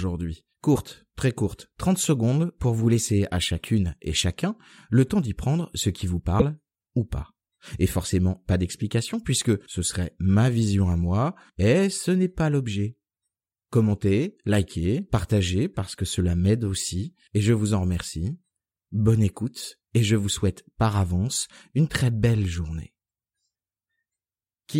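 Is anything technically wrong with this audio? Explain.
Yes. The speech skips forward twice, at 0.75 to 0.78 s just before "très courte" and at 6.39 to 6.42 s between "prendre ce qui vous" and "ou pas". Each time the glitch lasts about 30 ms, roughly one frame of about 26 ms. The likely cause is a broken MP3 bit reservoir: after frames were lost, the next frame drew its borrowed bits from the wrong data and decoded garbage. On the waveform this shows as a jagged discontinuity.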